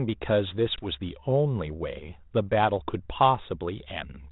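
At 0.76 s the speech drops into a hard-edged silent gap of about 20 ms, roughly one packet's worth: packet loss on an ADPCM call. When the sound resumes, the decoder's adaptive predictor and step size no longer match the sender's, so the audio comes back slightly distorted. It takes until about 0.86 s to settle. The codec itself is G.726 ADPCM, which at 32 kbit/s adds only light damage.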